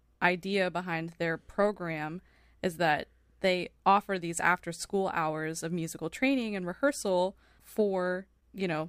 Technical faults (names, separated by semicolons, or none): none